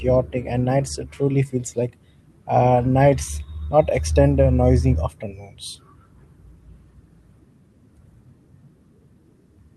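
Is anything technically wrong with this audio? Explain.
No, nothing technically wrong can be heard here.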